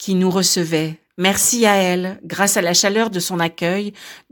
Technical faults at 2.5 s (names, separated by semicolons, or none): none